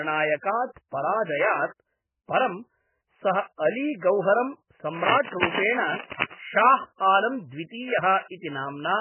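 Throughout the speech, heavy codec damage gives a watery, swirling quality with smeared attacks, likely from MP3 compression at a very low bitrate, which fits about 8 kbps. A spectrogram shows nothing above 3 kHz and patchy, flickering blocks where weak lines drop out.

From 4.90 to 6.35 s, just after "सः अली गौहरं", a burst of scratching and rustling sits roughly as loud as the speech, likely cable scratch noise from a worn contact being moved. The waveform shows dense, irregular spikes, and the spectrogram shows broadband smears.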